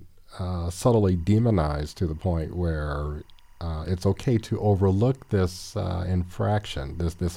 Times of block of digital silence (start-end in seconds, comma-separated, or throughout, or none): none